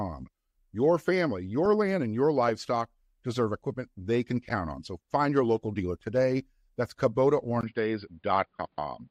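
Speech that, at 7.61 s, drops out for about 20 ms and then turns dull and boxy through to the end, with nothing above 4.9 kHz, a faint new background noise far below the voice, and little level change. The likely cause is the input switched to a poorer device mid-recording.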